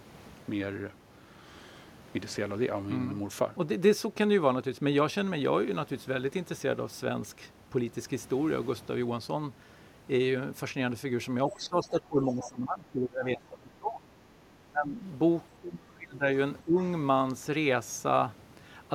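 From 11.47 to 14.11 s the speech keeps ducking, adding up to roughly two seconds of loss and sinking by about 20 dB at worst. That's speech suppressed in double talk, likely an echo canceller that couldn't tell the local talker from the loudspeaker echo while both sides spoke and turned everything down. Inside that stretch you also get the other side's voice leaking through, a faint scrap at 11.50 to 11.66 s about 20 dB under the speech and a slightly stronger one at 12.29 to 12.49 s, about 15 dB under. The probable cause is the canceller likely failing to strip all the loudspeaker sound from the mic, so bits of the far talker slip in. After that the suppression comes back in shorter bites. There's a dip of about 25 dB at 14.66 to 15.01 s, another of about 25 dB at 15.58 to 16.24 s, and a small one of about 15 dB at 16.64 to 16.75 s, each one a brief hole where the talker goes quiet.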